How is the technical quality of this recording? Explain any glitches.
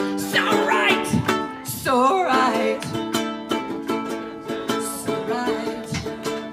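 The technical quality holds up, with no glitches to explain.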